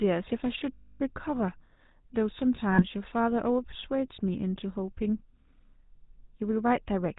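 Throughout the recording the speech carries the buzzy, gravelly texture of the GSM full-rate codec, consistent with the 13 kbps coder. The codec models the vocal tract and excites it with a coarse train of regular pulses, so even steady vowels sound rough and grainy, and nothing survives above 4 kHz. That is what separates it from simple telephone band-limiting: a plain filter sounds dull but clean, while here the damage is plainly audible as grit in the voiced sound itself.

Lost GSM frames interrupt the speech twice. From 0.74 to 1.01 s, a gap of about a quarter second, the decoder keeps re-using the last good frame's settings. The sound freezes into a rough, metallic ring that holds rather than stopping. A shorter loss from 2.72 to 2.85 s gives a brief hold of the same kind. Unlike a plain dropout, neither one falls to silence. The sound is smeared onward instead.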